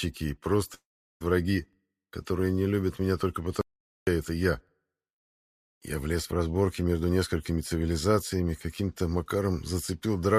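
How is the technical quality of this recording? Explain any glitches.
The recording has two clear interruptions, each roughly half a second long.

A long network dropout runs from 0.74 to 1.22 s. About 470 ms of audio likely never arrived, so the receiver stretched the last sound into a brief fading buzz or hiss. After that, roughly 0.38 s of near-silence follows, and the sound resumes further on with the lost portion missing.

An audio dropout to silence occurs from 3.61 to 4.07 s. The sound cuts off abruptly into about 460 ms of silence with no room tone, then returns mid-flow. This likely comes from the input briefly failing or muting while the recorder kept writing silence.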